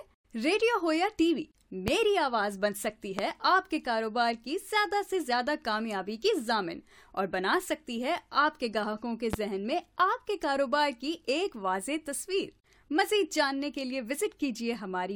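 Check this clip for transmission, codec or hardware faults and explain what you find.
Three loud pops break into the sound, at 1.88 to 1.90 s, 3.19 to 3.21 s and 9.33 to 9.36 s. Each is a single sharp pop, roughly 20 dB above the signal for the first two and somewhat less for the third. The likely cause is a sudden voltage pulse from a plug, switch, static or driver glitch. The sound continues underneath.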